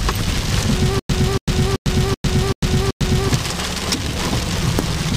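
A likely playback or stream stall causes stutter with silent gaps from 0.99 to 3.29 s: a 282 ms fragment repeats six times, each followed by 101 ms of digital silence.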